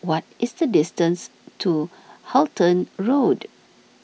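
Nothing in this bit of speech points to a technical fault, so there's nothing to flag here.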